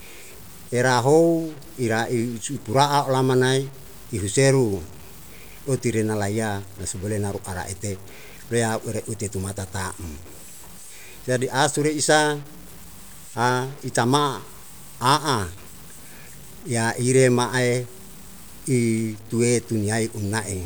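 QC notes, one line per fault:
Throughout, low bit depth without dither: grainy distortion rides on the speech and follows its level, and the quietest passages sputter or drop out. The likely cause is truncation to about 7 bits with no dither, leaving error only about 25 dB below the signal.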